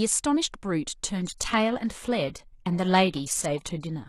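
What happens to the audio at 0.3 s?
Nothing goes wrong at 0.3 s; the speech there plays through intact, with no dropout, click, distortion or other fault.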